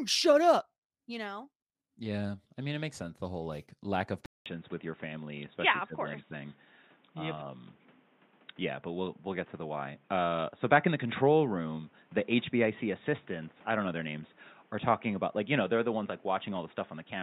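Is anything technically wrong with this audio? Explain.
Yes. At 4.26 s, just after "whole like lack of", the input switched to a poorer device, likely a different microphone or headset. A 0.2 s silence marks the switch. From there to the end, nothing passes above 3.8 kHz. The sound turns dull and boxy. A new background noise sits roughly 30 dB below the speech. The level stays about the same.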